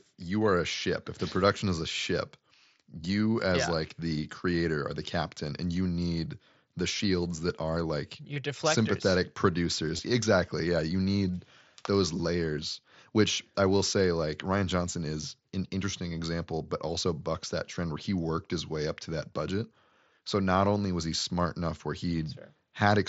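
Brief concealed gaps interrupt the speech at 5.50 s, after "the creator or the", at 8.34 to 8.36 s, before "deflectors sympathetic", and at 9.97 s, before "exactly yeah you need". This is concealed Bluetooth headset packet loss: frames of the wideband mSBC link dropped, and the receiver patched each gap by repeating the best-matching recent waveform. The short first gap fits one 7.5 ms frame and is nearly hidden, while the longer 8.34 s gap, a run of three frames, gives a held buzzy tone and a small warble.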